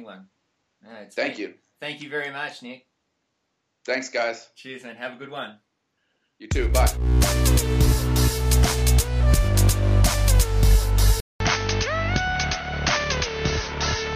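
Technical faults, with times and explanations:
11.20 to 14.16 s, input switched to a poorer device: after a gap of about 200 ms the sound returns dull and boxy, with nothing above 6.4 kHz, a drop of about 5 dB in level, and a new background noise sitting roughly 35 dB under the signal. This is likely the recording input moving mid-take to a lower-grade microphone or a headset's call profile, whose narrower band, own tone and noise floor carry through to the end.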